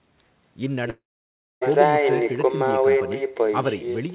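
Throughout, there is echo with no canceller. A quieter, thinner copy of the speech trails it by about a fifth of a second, roughly 13 dB down.

From 0.9 to 1.63 s, the sound stretches into a fading buzz or hiss, then goes silent. Speech resumes with a piece missing, likely a long network dropout.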